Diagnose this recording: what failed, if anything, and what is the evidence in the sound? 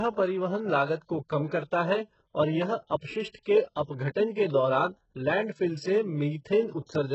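The codec stage shows heavy damage throughout the speech, most likely from HE-AAC compression at a very low bitrate, consistent with roughly 8 kbps. Nothing is present above 8 kHz, and the upper band sounds synthetic rather than recorded: sibilants come out gritty and lispy because the treble is rebuilt by copying lower bands upward under a coarse envelope. On a spectrogram the region above the crossover would look like smeared, repeated patches of the band below, with harmonics that fail to continue cleanly across the join.

Pre-echo, also from the codec stage, appears twice: from 3.42 to 3.46 s, spreading about 41 ms, and from 3.83 to 3.88 s, spreading about 53 ms. In each case a short hiss arrives just before a sharp onset, and the attack itself sounds softened. Quantisation noise sized for the loud attack has been spread across the whole transform block, filling the quiet gap ahead of it. 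A waveform would show a low noise skirt rising before each transient, and a spectrogram would show a broadband smudge leading it.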